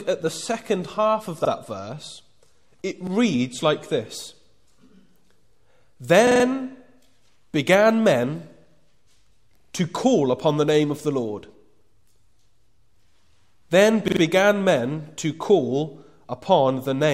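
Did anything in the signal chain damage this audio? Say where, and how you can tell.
Yes. In the codec and network stage, an adaptive stream starting at a low bitrate leaves nothing above 12.4 kHz until 4.1 s, then the treble returns abruptly with no gap, which fits AAC stepping from 48 to 96 kbit/s.

In the driver and buffer stage, a repeated buffer replays one 43 ms piece at 1.45, 3.07, 6.27, 9.60 and 14.08 s, fitting a 2048-sample buffer. These are stutters with hard joins, not dropouts.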